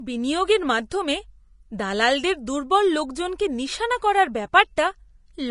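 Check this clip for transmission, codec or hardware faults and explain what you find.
One codec fault runs through the whole speech clip. The audio is dead above 10.6 kHz and the treble sounds hissy and grainy, likely Vorbis compression at a low rate, around 32 kbps.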